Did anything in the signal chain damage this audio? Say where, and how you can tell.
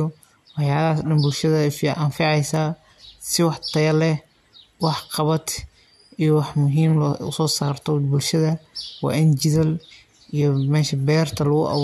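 No, nothing damaged this audio.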